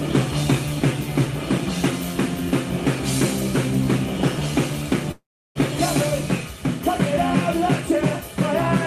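A long network dropout runs from 5.11 to 5.58 s. The sound collapses into a fading buzzy continuation of the last moment and then about 330 ms of silence, likely because roughly 440 ms of audio never arrived. The sound then resumes with that stretch missing.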